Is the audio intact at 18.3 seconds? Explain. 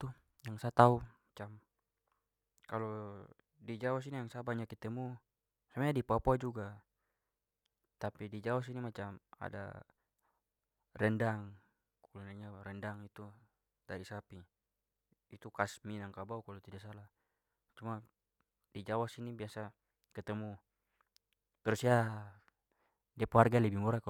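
Yes, the audio is intact at 18.3 seconds, with no fault audible at that point in the speech.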